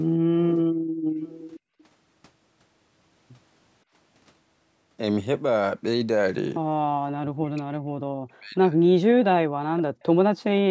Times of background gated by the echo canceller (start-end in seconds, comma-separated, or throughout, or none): 0.94-1.20, 1.60-1.76